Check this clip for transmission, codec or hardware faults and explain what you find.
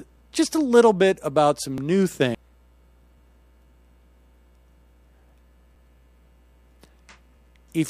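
Two faults are present: overlapping chunks and CD skips.

Overlapping chunks at 1.78, 3.18, 5.19 and 7.37 s: 2.0 s processing chunks start early, so about 13 ms plays twice at each join, heard as a brief stutter-click.

CD skip at 2.35 and 5.75 s: the laser jumped tracks, muting the output for a few milliseconds, heard as a tick and an abrupt jump in the audio.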